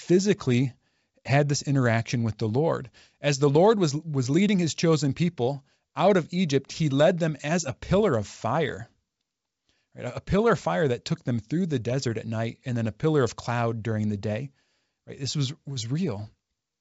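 Nothing here stands out as a fault: the speech comes through G.722 wideband telephone coding at 64 kbit/s, so the top end stops at about 7.7 kHz and any coding hiss in the upper band is faint at most.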